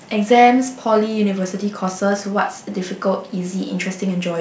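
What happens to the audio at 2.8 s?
Nothing goes wrong at 2.8 s; the speech carries on intact there, with only the call path's wideband coding audible as the usual lack of content above 8 kHz.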